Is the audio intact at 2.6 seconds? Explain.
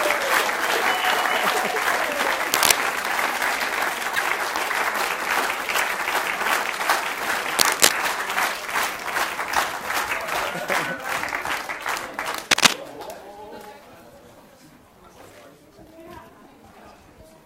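No. From 2.52 to 2.71 s a burst of cable scratch noise rides over the sound, a dense, ragged rustle roughly 5 dB above the signal. A worn connector or cable being moved is the likely cause, its contact resistance flickering. Unlike a single click or crackle, it is a continuous uneven scratching.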